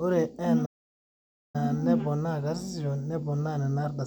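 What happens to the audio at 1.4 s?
At 1.4 s the speech has gone silent. It cut out mid-flow at 0.65 s and stays dead until 1.56 s, a gap of nearly 0.9 s, before the talking resumes. This is a playback stall: the output falls quiet because nothing is being delivered to it. The likely cause is the player running dry of buffered data, or its audio thread being blocked, and holding silence until it could continue.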